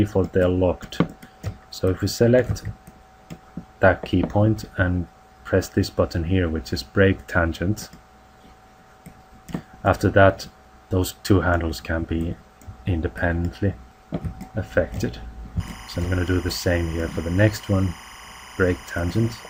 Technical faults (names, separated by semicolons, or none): timecode bleed